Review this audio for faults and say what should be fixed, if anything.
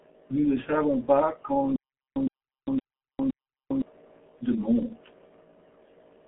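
The speech passes through a G.723.1 codec for its whole length. Nothing reaches above 3.8 kHz, and the usable band sits roughly between 200 Hz and 3.4 kHz, so the top end is gone and the sound is muffled. The damage is heavy. The codec rebuilds speech from a coarse vocal model updated in 30 ms frames, which smears consonants and adds a hoarse, buzzy edge, consistent with a rate near 6.3 kbit/s. To prevent it, carry the call over a wideband codec such as Opus or G.722 instead of G.723.1.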